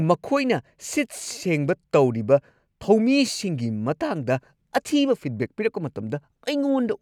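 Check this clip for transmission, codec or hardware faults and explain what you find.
No transmission, codec or hardware faults are audible here.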